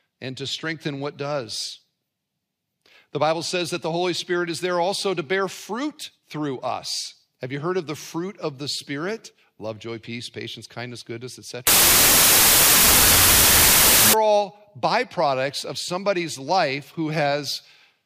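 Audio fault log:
11.67–14.13 s, wrong sample width: loud hiss with the speech buried inside, running at half speed and lower pitch. This fits 32-bit data read as 16-bit. Unlike a plain sample-rate error, the slowdown comes with noise.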